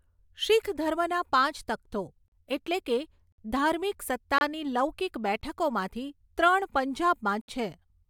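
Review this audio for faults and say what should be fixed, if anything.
The speech is broken by a gap between stream segments at five points: 2.28–2.32 s (about 40 ms), 3.32–3.38 s (58 ms), 4.38–4.41 s (27 ms), 5.41 s (16 ms) and 7.41–7.48 s (68 ms). Each is a hard-edged dropout to silence, spaced at roughly 1 s intervals, which fits 1-second segments whose timestamps leave a small hole the player pads with silence. No audio is lost; time is inserted. Concatenating segments by exact sample-accurate timestamps, without rounding drift, would prevent this.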